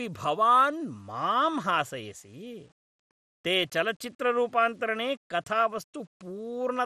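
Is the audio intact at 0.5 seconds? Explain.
No. At 0.5 seconds, as throughout the clip, the speech shows grainy distortion that shifts with the signal and sits roughly 40 dB below it. This is likely low bit depth without dither: rounding to coarse steps, which fits a 9-bit signal, leaves error that tracks the speech and roughens quieter passages.

The same moment also sounds dull and gurgling, with nothing above 14.4 kHz. This is likely MP2 compression at a rate that points to about 64 kbps: with too few bits across its sub-bands, the encoder drops upper bands and coarsely quantises the rest.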